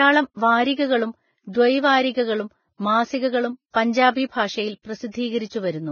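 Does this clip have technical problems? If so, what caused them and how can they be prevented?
Yes. The whole clip was likely passed through low-quality Vorbis compression, and the sound points to a bitrate of around 16 kbps. At that rate the codec removes everything above 6.5 kHz and quantises the remaining treble so coarsely that fine detail is replaced by noise of similar energy. The speech therefore sounds muffled, hissy and grainy throughout, with heavy codec damage roughening its tone. To prevent this, encode at a higher quality setting or bitrate, or keep a lossless copy.

Clock slip clicks run from 0.17 s to 5.81 s. They likely come from two devices running on independent clocks that differ by roughly 100 parts per million, with nothing synchronising them. Each time the drift adds up to a whole sample, one sample is dropped or repeated. This happens about every 0.3 s, giving around twenty small regular ticks spread across the speech. 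To prevent this, lock all devices to a single shared word clock, or use proper sample-rate conversion between them.

Pre-echo appears just before an attack at 1.52 s to 1.55 s. The transform codec spreads its quantisation noise evenly across a whole block. When a sharp onset falls late in that block, noise sized for the loud part also fills the quiet moment before it, smearing about 23 ms ahead of the attack. The result is a short hiss leading into a softened onset. To prevent this, use a higher bitrate or a codec setting with better block switching for transients.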